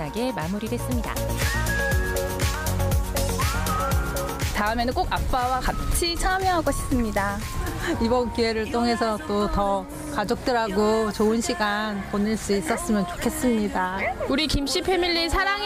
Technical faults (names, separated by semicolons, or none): none